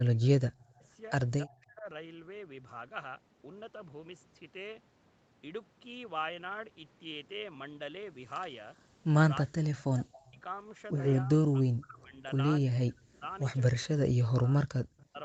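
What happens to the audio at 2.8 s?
Nothing goes wrong at 2.8 s: the speech there carries straight through, with only the normal band limit of the call path, which leaves nothing above 8 kHz.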